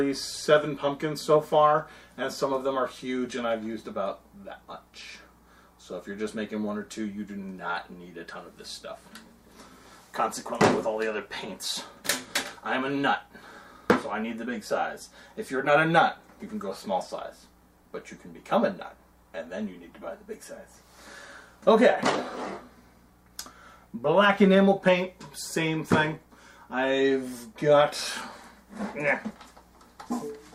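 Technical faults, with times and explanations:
Nothing technical stands out here; the audio comes through steady and untroubled all the way along.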